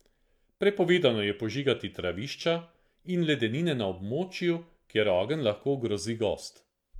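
No technical fault can be heard anywhere in the speech recording.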